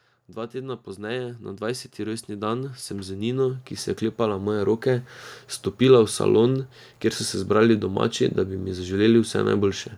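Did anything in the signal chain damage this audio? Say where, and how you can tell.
Yes: automatic gain rising, from 0.34 s to 5.14 s, at the call-processing stage. Over those nearly five seconds the level of the speech climbs steadily by about 17 dB, and the background noise floor comes up with it at the same rate. That shared, gradual swell is the giveaway: the automatic gain control judged the input too quiet and kept pushing its gain upward, amplifying everything in the signal rather than the voice alone.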